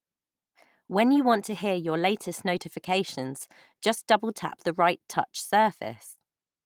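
There are no technical faults to describe in time order.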